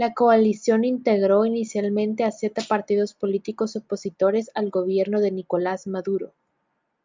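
Nothing in the speech stood out as a problem on listening.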